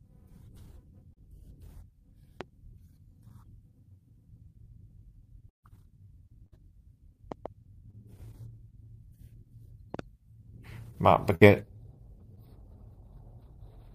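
Brief smears or wobbles in this speech recording at 1.13–1.18 s, 3.28–3.34 s, 7.91–7.95 s and 12.35–12.39 s are short concealed packet loss: 20 to 40 ms of audio never arrived, and the receiver covered each hole by extending the preceding sound for 14 to 31 ms before blending back. Sharp pops sit on top of the speech, about 15 dB above it, as a single pop at 2.41 s and as pairs at 7.32–7.48 s and 9.94–10.01 s. The speech carries on underneath, so these are likely electrical pulses from a plug, switch, static discharge or driver glitch. Longer dropouts at 5.49–5.64 s, 6.46–6.54 s and 11.35–11.43 s are a burst of packet loss. A held, fading continuation replaces 140 ms, 60 ms and 60 ms of audio respectively, and the first gap decays into about 120 ms of silence before the speech resumes further along.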